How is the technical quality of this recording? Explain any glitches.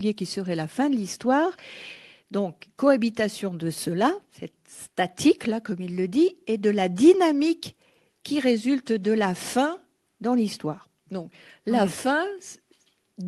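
The technical quality of this speech recording is good, and there are no glitches to explain.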